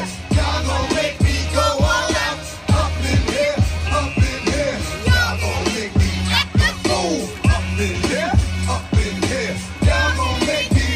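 No technical faults are audible.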